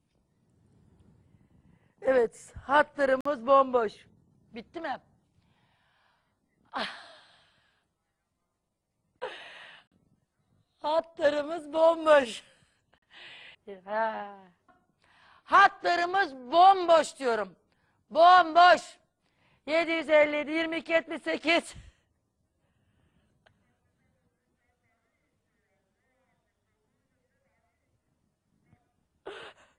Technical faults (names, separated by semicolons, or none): Bluetooth stall